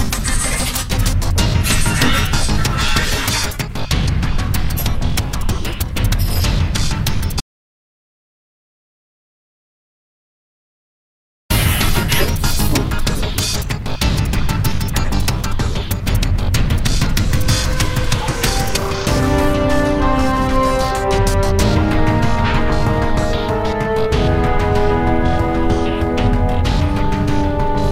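At 7.40 s the sound cuts off abruptly and is replaced by silence, with no room tone at all, until it resumes mid-flow at 11.50 s, losing about 4.1 s of material. This audio dropout to silence likely comes from a lost input, such as a disconnected device, failed link or stray mute, while recording continued writing silence.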